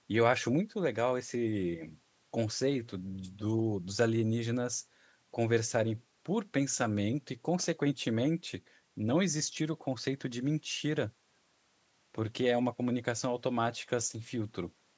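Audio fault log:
No faults can be heard in the speech. The call microphone processing is audible in the missing lowest bass and in a top end that stops at 8 kHz, both normal for that path.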